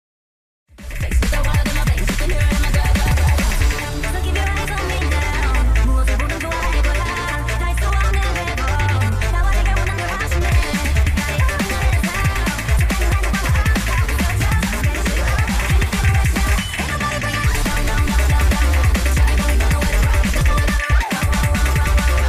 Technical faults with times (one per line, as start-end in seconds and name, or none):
none